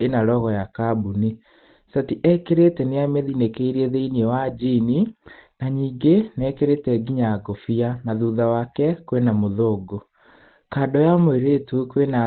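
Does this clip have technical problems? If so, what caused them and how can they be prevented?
Yes. The speech sounds muffled and hoarse from start to finish. Nothing is present above 4.4 kHz. The damage is plainly audible. The likely cause is Opus compression. The narrow band points to the codec's SILK speech mode at a very low bitrate, which fits about 16 kbps. With so few bits, the encoder drops the upper band and models the speech coarsely. Encoding at a higher bitrate, such as 32 kbps or more, would keep the wider band and prevent this.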